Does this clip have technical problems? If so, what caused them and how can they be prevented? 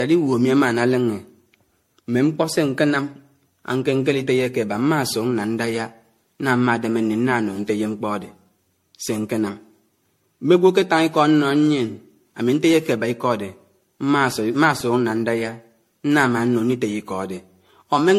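Yes. The speech was likely passed through an MP3 encoder about ten times, each decode and re-encode quantising on a shifted frame grid, which is generation loss. The whole clip sounds swirly, hollow and smeared, with softened consonant attacks, nothing above 16.5 kHz, and damage heavier than a single encode around 62 to 64 kbit/s would cause. Prevent it by keeping the audio in a lossless format until one final encode.

At 14.81 s the output buffer ran dry and the converter held its last sample value, an underrun with held sample. The waveform freezes flat for 1.33 ms, which fits a 64-sample gap, and then resumes where it stopped, so it gives only a faint tick. Prevent it with a larger output buffer or higher priority for the audio thread.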